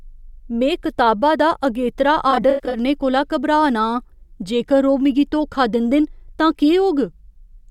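After "में कताबा दा अगेतरा", 2.31–2.77 s, AAC frame loss with concealment patches 213 ms of gaps from earlier spectra: smeared, noisy bursts, blurred spectrogram blocks.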